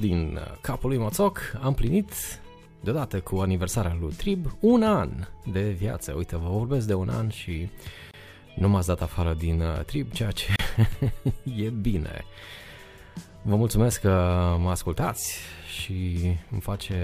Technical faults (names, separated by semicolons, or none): gap at a join of encoded pieces